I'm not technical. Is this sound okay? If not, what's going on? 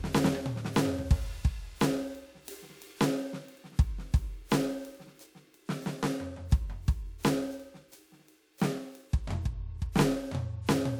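No. Throughout the music there is periodic clock jitter: interference wobbles the timing clock that turns the sound into digital samples, at a steady rate of about 1 kHz. That adds a rough, metallic edge that rides on the music and disappears whenever it goes silent.

Near the end, from 9.92 to 9.95 s, there is pre-echo. The compression that shrinks the file handles sound in short blocks and spread its noise across one of them, so about 32 ms of hiss arrives just before a sharp attack, which sounds softened or smeared.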